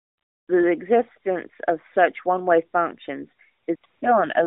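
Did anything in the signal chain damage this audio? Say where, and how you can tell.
Yes, at the codec stage: AMR comfort noise. From 0.00 to 0.48 s, and again at 3.64–3.68 s, 3.76–3.84 s and 3.86–4.02 s, the real background gives way to a smooth, steady hiss that switches in and out. The encoder judged these stretches silent and stopped sending speech frames, so the receiver synthesised noise from a rough level and spectrum. A network dropout or noise gate would leave silence, not this stand-in noise. The narrowband path around it (250 Hz–3.6 kHz, light AMR-NB colouring that fits the 12.2 kbps mode) isn't the fault.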